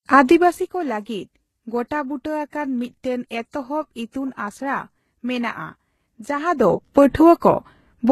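Transcoding between lossy codecs runs throughout the speech: nothing sounds above 12.3 kHz, and the smeared, swirly artefacts of a very low-rate HE-AAC-style encode sit under a later Vorbis-like layer, likely a second encode compressing the first one's damage. Zipper noise appears from 6.32 to 6.76 s as the level changes by about 15 dB in unsmoothed steps of about 1 dB, around thirty a second, each leaving a small click that zips over the speech.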